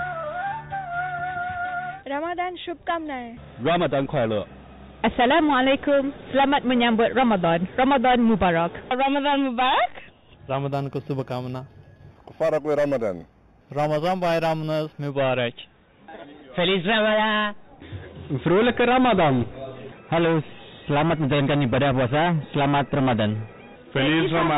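From 10.73 to 15.10 s there is imaging from linear upsampling. The rate was raised by joining samples with straight lines, which fits an 8 kHz source. The top is dulled, and a faint mirrored copy, about 30 dB down, fills 4 to 8 kHz with metallic shimmer.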